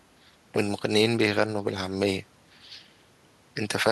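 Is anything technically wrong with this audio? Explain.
No, the recording carries its speech through without any audible technical fault.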